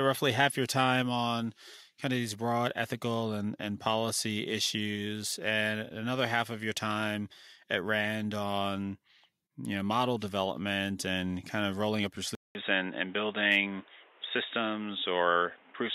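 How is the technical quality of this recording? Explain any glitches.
The recording has one clear glitch near the end. At 12.35 s, right after "of rolling up your", the sound drops out for 200 ms. From there to the end it is dull and boxy, with a modest level shift and a faint new background noise. This is likely an input switched to a poorer device.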